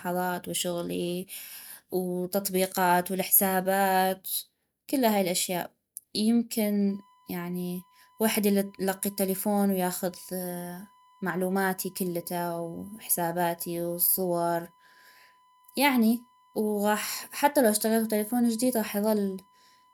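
USB whine enters this speech clip at 6.89 s and runs to the end: a steady 1 kHz tone, about 35 dB below the signal, from USB's 1 ms frame current leaking through power or ground.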